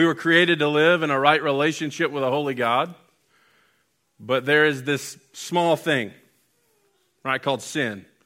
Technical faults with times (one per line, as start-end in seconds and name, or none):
none